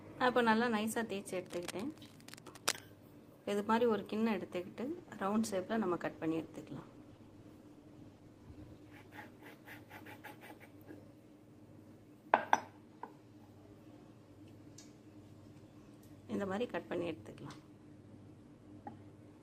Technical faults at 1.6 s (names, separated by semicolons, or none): cable scratch noise